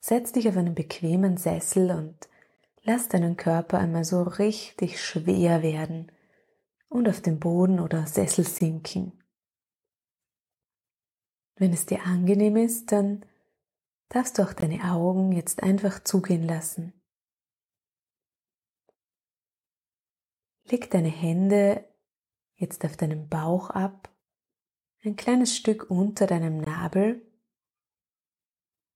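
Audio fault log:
2.56–2.58, 8.58–8.60, 14.60–14.62, 20.62–20.64 and 26.64–26.66 s: gap between chunks. A 20 ms hole interrupts the sound every 6 s. The audio was joined from 6-second chunks with silence inserted at each join, so nothing is lost but the flow breaks there.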